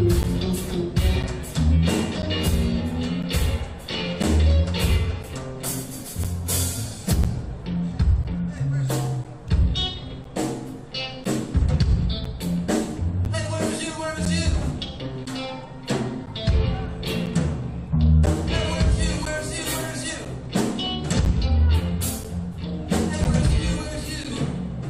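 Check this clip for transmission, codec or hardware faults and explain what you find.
A hardware fault is present: periodic USB or driver dropouts run from 0.23 s to 24.25 s. Something in the system stalls the USB bus or the audio driver once a second, and each stall loses about 10 ms of audio, which is replaced with silence. The result is a steady tick or small pop every 1.0 s, evenly spaced through the clip, and it is heard only while sound is present.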